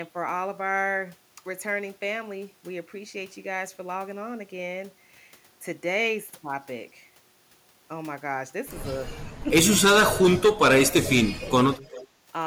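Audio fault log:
9.43 to 11.79 s, speech suppressed in double talk: the echo canceller, likely confused by both sides talking at once, pulled the speech down in three places. There is a brief dip of about 10 dB at 9.43 s, the speech drops by up to about 30 dB in pieces across 10.73 to 11.49 s, and there is a slight dip at 11.74 s.
11.84 to 12.06 s, echo leak: a loudspeaker echo, likely not fully cancelled, was sent back down the line. A faint copy of the speech, roughly 20 dB below it, returns 395 ms late as a short scrap near the end.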